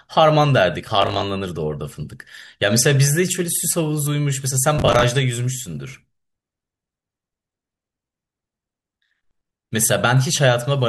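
Speech with processor overload crackle at 1.02–1.24 s and 4.75–5.03 s: gritty tearing where the system missed a run of roughly 10 ms buffer deadlines and replayed stale audio.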